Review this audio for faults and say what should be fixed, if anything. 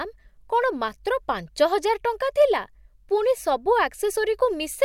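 Nothing stood out on listening to this recording, so there is nothing here that needs fixing.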